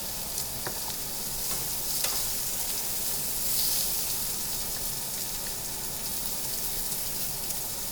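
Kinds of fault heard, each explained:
Nothing stands out here, just sounds with no faults to point to.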